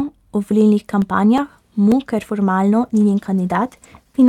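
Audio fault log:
1.02–2.10 s, CD scratch ticks: seven brief clicks, the longest about 4 ms, after "o volilnih", as a disc blemish defeats error correction once per revolution.
2.82 s to the end, call bitrate drop: after "ker formalno" the sound turns rough and muffled as the encoder falls from 64 to 16 kbps, coding coarsely.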